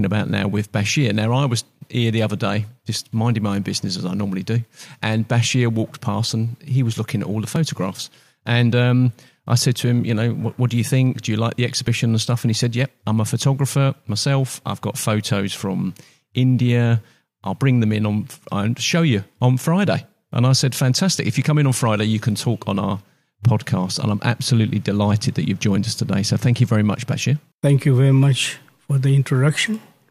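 At 7.56 s and again at 11.87 s there is a small jump forward in the sound, with no gap of silence, which is what separates it from a dropout. About 10 ms, then about 5 ms, goes missing, likely a dropped buffer (overrun) that was overwritten before it was read.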